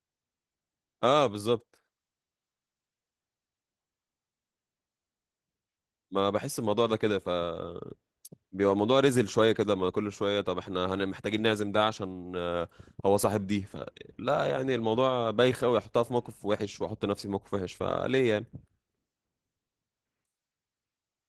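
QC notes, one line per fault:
Throughout: Opus voice compression, plainly audible. The speech sounds hoarse and slightly robotic, which fits hybrid coding around 16 kbps: coarse linear prediction below 8 kHz, a thin transform layer above. A spectrogram shows smeared harmonics and patchy, blocky energy above 8 kHz, stepping every 20 ms.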